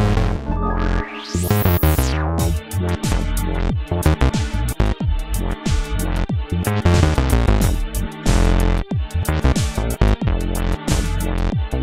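No technical faults are audible.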